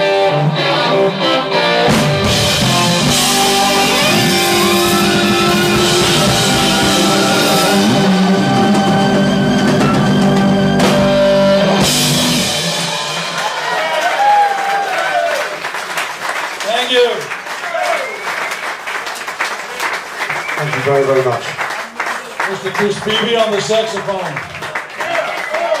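Nothing in the audio stood out as a technical problem on listening.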